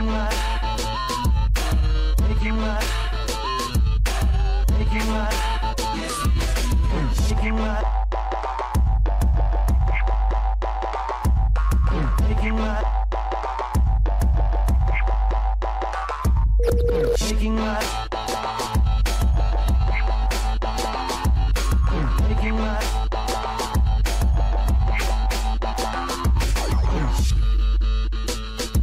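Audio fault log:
No faults can be heard anywhere in this clip. There is nothing to log.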